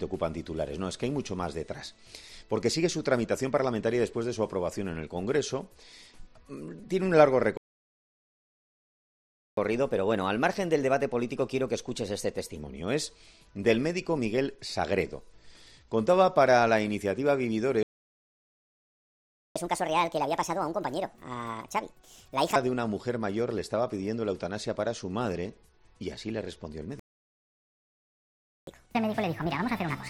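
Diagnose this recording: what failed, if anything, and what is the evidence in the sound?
Playback stall, three times. The sound cuts out mid-flow at 7.57 s for 2.0 s, at 17.83 s for 1.73 s, and at 26.99 s for 1.68 s. That points to the playback stage. The player most likely ran dry on its buffer or had its output thread blocked, so nothing was fed to the device until it recovered.

Catch-up at higher speed follows every stall, so the player is resampling its backlog to win back lost time. After the first gap, from 9.57 to 12.57 s, it runs at 1.1x, lifting pitch about a semitone and a half. After the second, from 19.56 to 22.56 s, and the third, from 28.67 s to the end, it jumps to 1.5x, roughly seven semitones up, which is a chipmunk lift.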